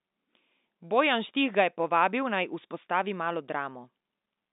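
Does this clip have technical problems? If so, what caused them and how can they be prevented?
No, nothing here needs fixing; it's just ordinary speech carried over a G.711 telephone line, so everything outside roughly 200 Hz to 3.7 kHz is trimmed away, which is exactly how that phone format is supposed to sound.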